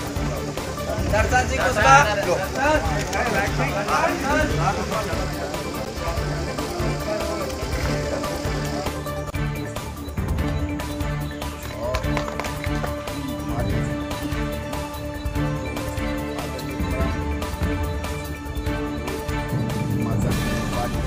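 At 5.85 s there's a block of digital silence, a hole about 10.7 ms long where the output simply dropped to zeros, which fits a 512-sample buffer that wasn't filled in time. With no fade either side, you hear it as a sharp tick.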